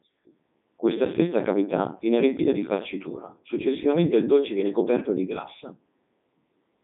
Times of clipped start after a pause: none

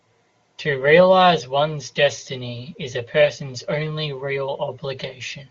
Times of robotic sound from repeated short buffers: none

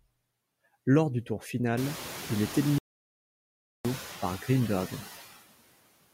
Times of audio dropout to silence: 2.78-3.85

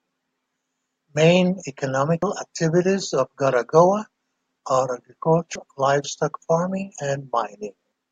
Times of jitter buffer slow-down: none

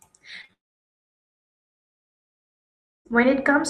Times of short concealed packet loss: 0.41-0.50

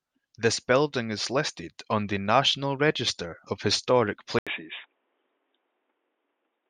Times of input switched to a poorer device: 4.39-6.69

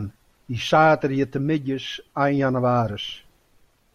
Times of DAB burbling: none

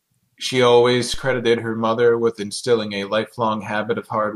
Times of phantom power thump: 1.14-1.55

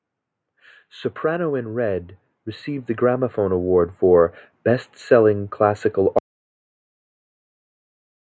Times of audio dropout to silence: 6.18-8.23

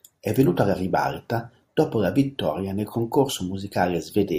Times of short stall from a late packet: none

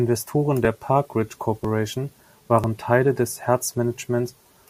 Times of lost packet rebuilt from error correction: none

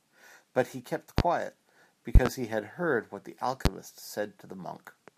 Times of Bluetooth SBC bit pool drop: none

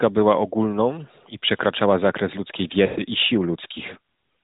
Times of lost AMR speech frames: 2.86-3.02

